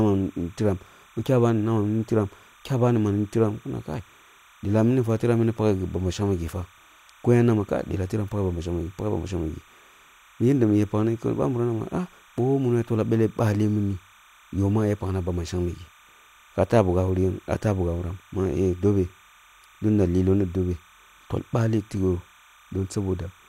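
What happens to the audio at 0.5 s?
At 0.5 s, timecode bleed sits under the speech, as it does for the whole clip. Linear timecode running at 30 frames per second leaks in from a neighbouring track or cable. Its square wave flips between roughly 1 kHz and 2 kHz, some 30 dB below the speech. It sounds like a faint, steady chirping warble.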